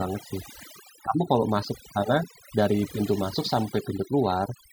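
From start to end, the speech shows overdone noise removal: the noise reduction was set so aggressively that frequency bands near its noise estimate are cut almost entirely, taking low-level speech detail with them. Gaps fall to near silence with sparkling artefacts.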